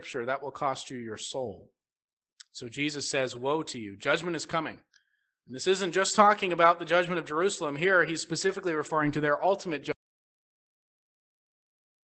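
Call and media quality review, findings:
Lost packet rebuilt from error correction at 7.25 s (about 20 ms) and 8.47–8.53 s (about 40 ms, two packets). No gap in either, just brief rough, noisier patches of speech. The next Opus packet carried a low-rate copy of the missing audio, and the decoder played that copy.

Audio dropout to silence from 9.92 s to the end. The speech cuts off mid-flow into silence with no room tone. Likely cause is the input being lost, such as a device disconnect or mute, while the recorder kept writing silence.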